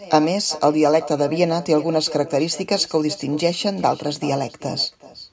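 Echo with no canceller runs throughout this speech clip: every phrase returns around 0.4 s later as a thinner copy, about 16 dB below the direct speech, because the far end's loudspeaker feeds its microphone and nothing removes the loop before sending it back.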